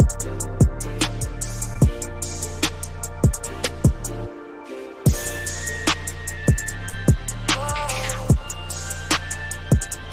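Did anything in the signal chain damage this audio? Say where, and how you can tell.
Yes, at the network stage. Two brief smeared, wobbling patches are audible, one at about 1.73 to 1.77 s and another at about 6.89 to 6.94 s. These are short concealed packet losses. About 20 ms and then about 40 ms of audio arrived too late for the decoder. The receiver covered roughly 16 ms and 33 ms of each gap by extending the preceding sound, then crossfaded back into the real signal.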